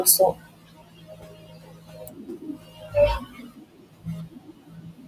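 Noise suppressor artifacts run through the whole clip. The room noise, sitting about 17 dB below the speech, is pulled down band by band between phrases and swells back under them.

From 0.33 to 2.95 s, and again from 3.19 to 5.07 s, there is speech cut by the noise suppressor. The processing mistakes quieter parts of the speech for noise and turns them down, by up to about 18 dB in the first stretch and about 19 dB in the second. Soft consonants and word tails sound swallowed. This loss falls on the speech itself.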